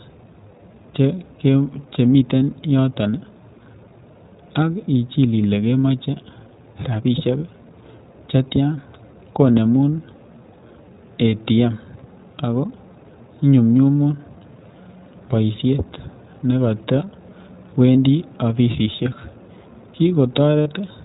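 Throughout, the speech carries the iLBC codec: a spectrogram shows nothing above 4 kHz, and the sound is plainly rough and synthetic, which fits its 15.2 kbps mode with 20 ms frames.

Lost iLBC frames follow at 6.56–6.59 s after "ak ichil ile kemoche", 9.53 s, 11.30–11.32 s, 18.72–18.75 s after "boishet nekotewendii", and 20.63–20.68 s (the last about 40 ms, the rest about 20 ms). Each gap becomes a brief held, buzzy vowel from a repeated pitch cycle. On a spectrogram this shows as flat, unchanging harmonic stripes, and the waveform repeats similar periods. The voice is right again almost at once afterward.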